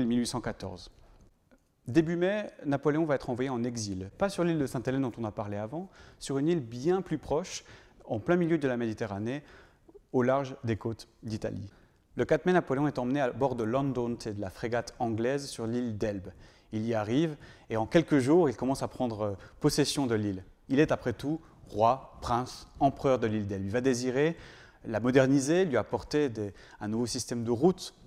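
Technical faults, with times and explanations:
No technical faults can be heard anywhere here.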